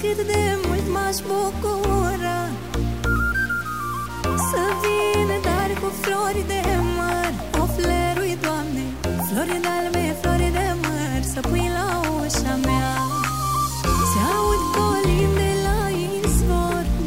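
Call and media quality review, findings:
Stuck bit, whole clip: harsh buzzy distortion, gaps filled with steady noise. Likely converter or data-line fault holding one bit fixed, offsetting samples by about -35 dBFS. Waveform shows stepped, bimodal offsets; spectrogram shows broadband haze through pauses.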